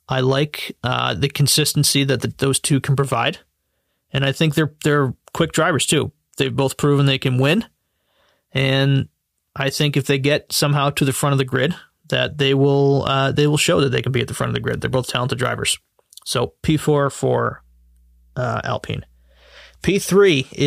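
Near the end, from about 17.42 s to 20.32 s, mains hum comes in under the speech: a steady low drone at 60 Hz, sitting well below the talker, roughly 35 dB down. That's power-line energy leaking into the signal path, the kind of thing a ground loop or a transformer sitting too close to the cabling will do. It just switches on, hangs there as a flat buzz, then drops away.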